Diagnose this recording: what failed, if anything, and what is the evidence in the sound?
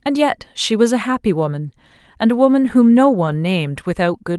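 At the network stage, lost packets were rebuilt from error correction at 1.67 to 1.69 s and 3.27 to 3.33 s. Opus's low-bitrate redundant copies filled them, so there is no gap: the waveform stays continuous, and the spectrogram shows brief rougher, noisier patches below the codec's 12 kHz ceiling.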